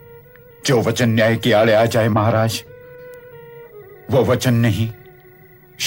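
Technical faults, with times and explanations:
3.14 s, bit error spike: a single sharp tick where a flipped bit briefly threw about three consecutive samples off by a power of two before they snapped back. That's why it sounds broadband and has nothing to do with the surrounding sound.
4.66 to 5.13 s, CD scratch ticks: three regular ticks, each well under a millisecond, landing once per disc revolution. A blemish wiped out more data than error correction could rebuild, so the player patched or muted those few samples each time around.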